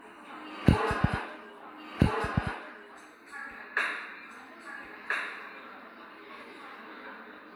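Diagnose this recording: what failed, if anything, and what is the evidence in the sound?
A doubled audio track runs throughout: each event recurs about one and a half seconds later at similar level, with no decay, likely from duplicated capture.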